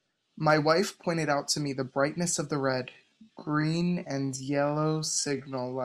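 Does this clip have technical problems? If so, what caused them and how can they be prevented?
Yes. From 2.85 s to the end there's a time-stretched section: the pace drops to 0.635x with pitch unchanged, so the speech drags, likely from software stretching audio to fill a length. Avoid it by editing to length rather than stretching.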